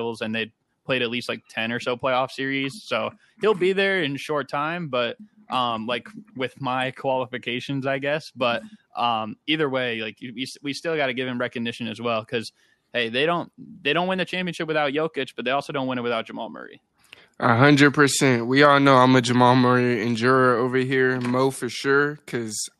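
No technical faults can be heard anywhere in this recording.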